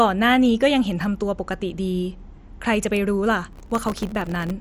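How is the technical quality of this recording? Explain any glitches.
The technical quality is poor, with two faults. Throughout, the speech sounds dull and gurgly with nothing above 13.7 kHz, likely MP2 compression starving upper sub-bands of bits, which fits a rate near 64 kbps. From 3.53 to 4.51 s, processor overload crackle occurs: dozens of tiny buffers, each a millisecond or two, miss their deadlines and drop to silence, tearing the sound into gritty crackle.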